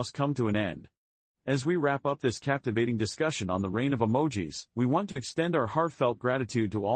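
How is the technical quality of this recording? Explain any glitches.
The recording has one glitch, a short concealed packet loss between 5.11 and 5.18 s, in speech that has passed through a call codec whose top end stops near 12 kHz. Just after "of emojis we want" and before "extend our", about 40 ms of audio failed to reach the receiver in time. The decoder filled the gap by extending the preceding sound and then blended back into the real signal, leaving a brief smeared wobble where the speech momentarily blurs.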